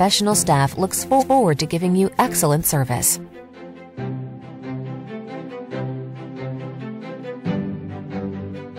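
From 0.02 to 1.49 s, a gain stage is overdriven by about 2 dB, so peaks are cut flat: hard clipping, heard as crackle on the louder moments. Within that stretch, at 1.19 s, a block of compressed frames is sent twice. These repeated frames replay the same 0.19 s, which fits a run of four frames, as a stutter that lengthens the audio by 0.19 s. From 2.01 to 2.69 s the overload returns at about 4 dB, and this harder clipping is heard as crackle on the peaks.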